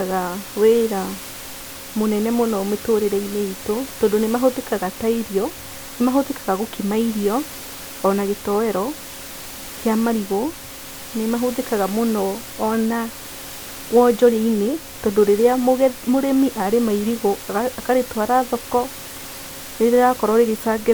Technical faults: none

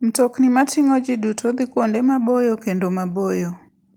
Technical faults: none

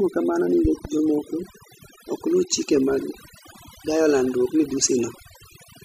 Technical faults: overdone noise removal; loud pop

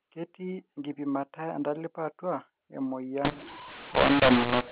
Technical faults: mu-law and A-law mixed up

